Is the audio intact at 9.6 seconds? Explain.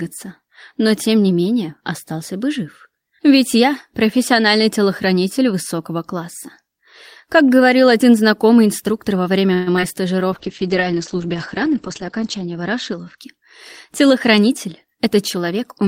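No. From 9.53 to 9.69 s there is a call audio freeze: the last sound is stretched into a buzzy, fading hiss for about 132 ms before the audio resumes where it stopped, now running 132 ms later, with nothing dropped. The likely cause is packets held up in transit, draining the jitter buffer so the receiver had to fill the gap. A spectrogram shows a smeared, frozen spectral slice that dims; the waveform shows a repetitive, decaying pattern.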